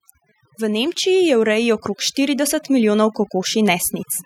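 Overdone noise removal runs across the whole recording. The noise reduction was set too aggressively, so frequency bands sitting close to its noise estimate are pushed down or switched off, taking the softer parts of the voice with them. The background drops and breaks up into twinkling specks.

From 0.57 s to 3.91 s the automatic gain control rises. It judged the input too quiet and raised its gain steadily by about 7 dB. Over those three-plus seconds, voice and residual background grow louder together in one slow, even swell.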